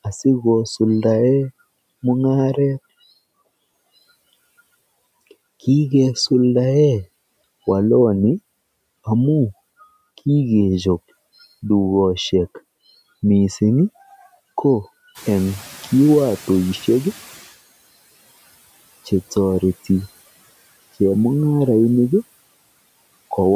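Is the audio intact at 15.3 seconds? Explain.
No. At 15.3 seconds the noise suppressor is catching up. The room noise jumps by about 15 dB around the 15-second mark, to about 23 dB below the speech. The suppressor's noise estimate still reflects the quieter floor from before, so the louder noise passes through with less reduction. From 15.14 to 17.56 s, over about 2.4 s, the estimate adapts. The noise then sinks by about 14 dB.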